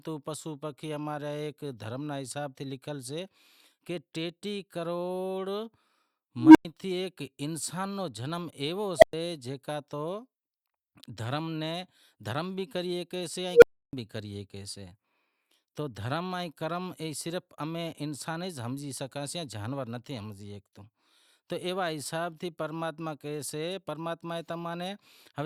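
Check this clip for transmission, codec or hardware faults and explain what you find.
An unstable filter fault occurs three times, at 6.37, 8.98 and 13.52 s. A recursive filter's output grows without limit. A tone of about 300, 700 and 500 Hz swells over 184, 41 and 106 ms and clips. Overflow then silences it for 100, 110 and 310 ms, ending before "تھے ایک انسان رو" and "بھی کریسے".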